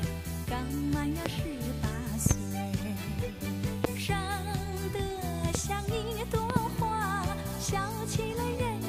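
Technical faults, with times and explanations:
1.26 to 6.59 s, loud pop: sharp pops at 1.26 to 1.28, 3.84 to 3.87 and 5.55 to 5.57 s, with close double pops at 2.26 to 2.33 and 6.50 to 6.59 s, each standing roughly 20 dB above the sound. Likely a voltage step or pulse from a plug, switch, static discharge or driver glitch, shaped by the following circuits into a thump. Unlike a dropout, the sound carries on underneath without a gap.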